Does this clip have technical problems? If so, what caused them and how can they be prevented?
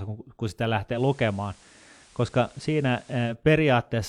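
Yes. Right after "kun kun sitä", at 0.91 s, the digital radio blends to analogue FM over a quick 113 ms crossfade and stays there until 3.36 s. You get hiss roughly 30 dB under the speech, though the level holds steady. A stronger signal or a better antenna keeps the receiver on digital.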